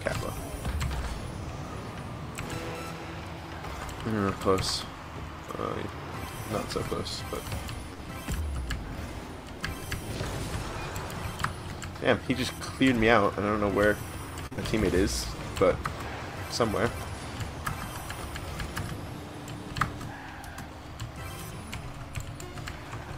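At 7.93 to 8.01 s a short stall from a late packet holds the last sound for 55 ms. It then resumes from the same point, so unlike a loss nothing is skipped. From 12.72 to 13.14 s a jitter buffer speed-up trims some 40 ms by removing whole pitch periods, so the audio hurries to 108% speed without rising in pitch. At 14.47 to 14.53 s a second stall stretches the sound by 45 ms. It is followed at 14.53 to 14.59 s by a short concealed packet loss: 40 ms never arrived, and 43 ms of continued sound fills the gap. This heard as a brief smear, and here audio is genuinely missing, not just delayed. From 21.53 to 22.27 s another speed-up, at 106%, removes around 50 ms, again faster but at unchanged pitch.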